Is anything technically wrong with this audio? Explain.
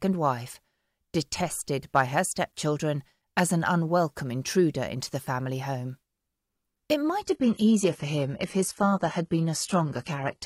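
Yes, there is one fault. From 7.22 s to the end, the adaptive stream drops to a lower bitrate. The player switches abruptly and without a gap to a lower-quality version, which fits a fall from a mid-rate AAC stream to a low-rate HE-AAC one. The sound turns duller, with added codec artefacts. On a spectrogram, everything above 11.8 kHz vanishes at that instant. The waveform shows no break.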